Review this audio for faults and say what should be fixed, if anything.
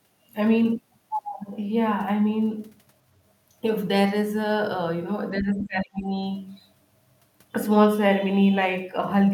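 Speech suppressed in double talk runs from 5.35 to 6.1 s. The speech dips sharply, by about 25 dB at its deepest, for most of that span. The likely cause is an echo canceller that could not tell its own talker from the loudspeaker echo, so it turned both down. A better double-talk detector would prevent this.

The other side's voice leaks through from 5.59 to 5.63 s. It is a brief scrap, about 20 dB below the speech. The likely cause is the device's echo canceller leaving some of the loudspeaker's sound in the microphone signal. Stronger residual echo suppression would remove it.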